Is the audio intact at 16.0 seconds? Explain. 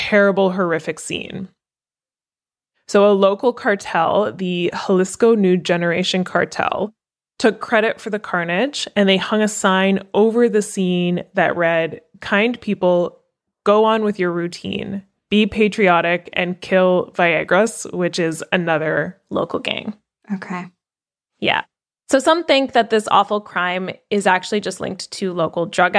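No. A wrong sample rate runs from 0.0 to 19.29 s, ending before "local gang". Playback is too slow, which fits 24 kHz audio played at 22 kHz. Speech sounds slow and low, about 1.5 semitones down.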